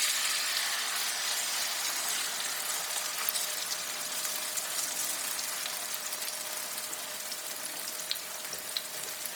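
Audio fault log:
Throughout: Bluetooth LC3 compression, likely the cause of the heavy damage heard across the whole clip, with a grainy, breathy edge on the sounds where the upper spectrum has been thinned out and refilled with noise. The rate of damage fits a bitrate around 32 kbps and a 10 ms frame. On a spectrogram the upper bands show patchy, speckled noise fill instead of clean harmonics, with nothing above 20.2 kHz. The waveform reveals little.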